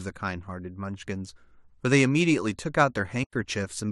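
A soft-edged gap of about 90 ms opens in the speech from 3.24 to 3.33 s, fading out and back in. This is AAC frame loss with muting: the decoder zeroed the missing frames, and with the likely low-delay AAC path's short frames, the hole points to roughly nine lost.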